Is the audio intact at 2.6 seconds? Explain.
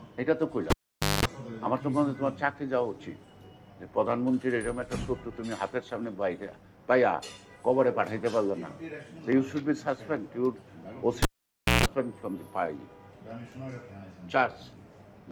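Yes, the audio is intact at 2.6 seconds, with nothing there breaking, dropping out or distorting the sound.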